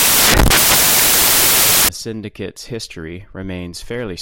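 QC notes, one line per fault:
0.00–1.89 s, samples built from the wrong bytes: a burst of loud, harsh broadband noise replaces the speech. The sample bytes are being joined wrongly, so the rapidly changing low bits end up dominating each value.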